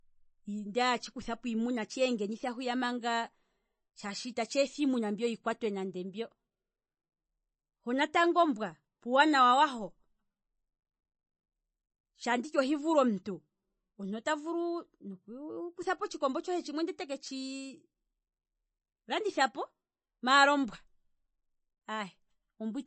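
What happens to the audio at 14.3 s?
At 14.3 s, as throughout the clip, the speech likely went through heavy MP3 compression, consistent with roughly 27 kbps. Starved of bits, the encoder removed everything above 8.3 kHz and dropped weak frequency lines, leaving a dull, watery, swirling sound with chirpy sibilants.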